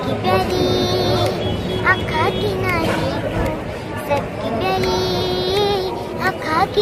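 No technical faults can be heard anywhere in the clip.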